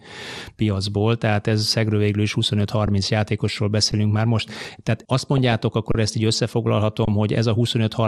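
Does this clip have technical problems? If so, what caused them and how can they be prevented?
Yes. Three kinds of fault can be heard in this speech.

MP2 compression runs through the whole clip and is plainly audible. The speech sounds dull, as if its top end had been shaved off, and a granular, gurgling texture sits on what remains. This is likely the work of an MPEG Layer II encoder short of bits. It shuts off upper sub-bands and quantises the rest coarsely, which fits a rate around 80 kbps. Unlike a simple low-pass filter, the missing highs flicker rather than staying cleanly absent. Encoding at a higher bitrate, or with a more efficient codec, prevents it.

Underruns with a held sample occur at 2.86 s and 3.92 s, from 5.92 to 5.95 s, and from 7.05 to 7.08 s. The gaps last about 6, 10, 30 and 23 ms. Each time the output buffer ran dry, the converter froze on its last value, so the waveform goes flat. 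Playback then resumed where it stopped with nothing skipped, so the joins are soft rather than clicky. That softness sets these apart from dropouts that lose live audio. A larger output buffer, or a playback thread with higher priority, prevents it.

DAB burbling appears from 5.38 to 5.53 s. Over that 150 ms, short blips of noise land in single sub-bands on top of the speech, which fits roughly seven corrupted audio frames. Bit errors from weak reception slipped past error correction into the MP2 data and corrupted samples. That makes it distinct from the dullness of the compression itself, which runs through the whole clip. Better antenna placement or a stronger multiplex signal prevents it.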